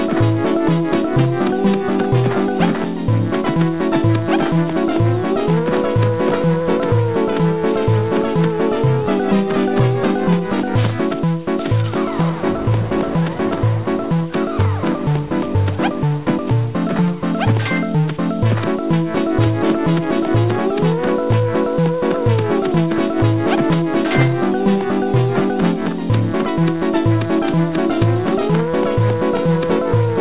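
Nothing in the audio points to a technical fault; the signal stays continuous and steady throughout, with no interruptions, distortion or level problems to report.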